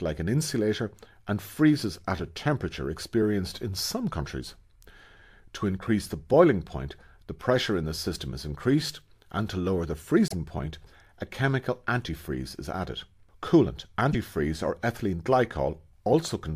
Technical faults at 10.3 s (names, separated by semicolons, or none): broken MP3 bit reservoir